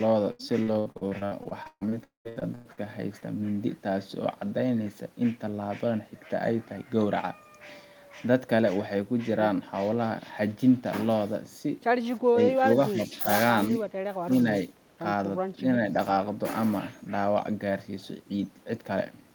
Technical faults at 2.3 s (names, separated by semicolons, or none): long network dropout; repeated packet loss (robotic sound)